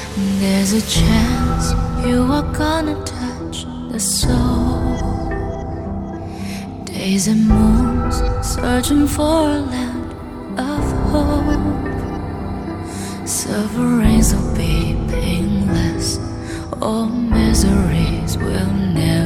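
No technical faults are audible anywhere in the audio.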